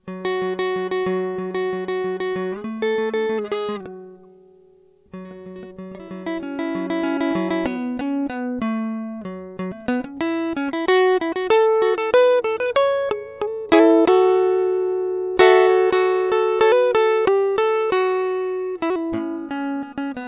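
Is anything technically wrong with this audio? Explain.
No, nothing technically wrong turns up anywhere in this music.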